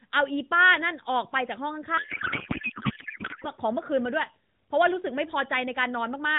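From 1.98 s to 3.49 s the speech gives way to a codec payload misread: the AMR frames are still decoded, but the bits land in the wrong fields, so the output becomes garbled noise and warble that barely tracks the talker. The pattern fits octet-aligned AMR being read as bandwidth-efficient. Either side of that stretch, the narrowband AMR coding shows its usual 4 kHz ceiling and only light coding texture, consistent with the 12.2 kbps mode.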